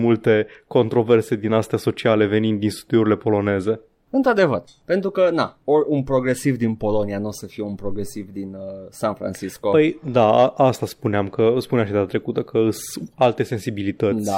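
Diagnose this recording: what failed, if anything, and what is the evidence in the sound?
Nothing failed; the speech shows no audible fault.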